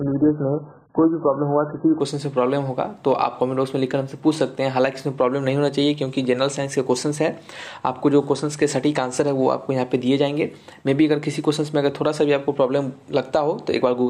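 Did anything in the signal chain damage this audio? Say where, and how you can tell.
Yes. Adaptive stream starting at a low bitrate, 0 to 2.0 s: nothing above 1.8 kHz, then treble returns abruptly, gaplessly, as the player steps up.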